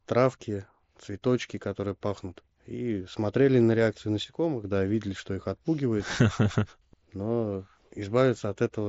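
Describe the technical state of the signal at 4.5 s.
A sudden gain jump runs from 4.24 to 4.64 s: speech and background noise both drop about 6 dB at once, likely from a gain step applied without a ramp.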